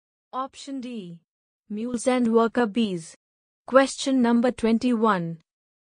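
A gain setting was likely applied without a ramp at 1.94 s, a sudden gain jump of about 11 dB, so sound and background noise leap louder together until the end.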